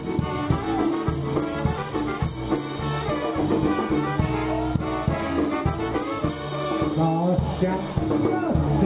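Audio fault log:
No faults heard.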